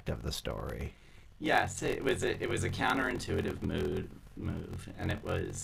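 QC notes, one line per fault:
Throughout, block size mismatch (padded): the speech carries a steady buzz at 43.1 Hz and runs slow, at 0.861 times normal speed, while its timbre stays. Each block is read at a larger size than was written, and the shortfall is filled with silence. That puts a brief gap in every block, and the gaps repeat at the block rate. The 43.1 Hz buzz fits 1024-sample reads at 44.1 kHz, with roughly 880 samples of real audio in each.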